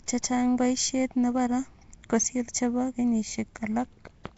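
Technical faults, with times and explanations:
Throughout, Nellymoser compression. The speech sounds grainy and hissy, with a blurred, watery edge. Nothing is heard above 7.7 kHz. The likely cause is Nellymoser Asao coding at a rate that fits 32 kbps. Quiet bands lose their bits and are refilled with noise.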